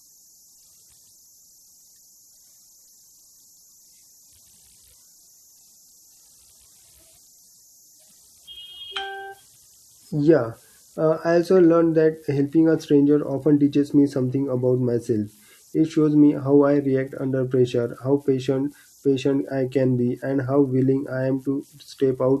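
Converter idle tones persist throughout: the undithered delta-sigma converter cycles bit patterns, leaving a faint whistle near 7 kHz, about 35 dB below the speech.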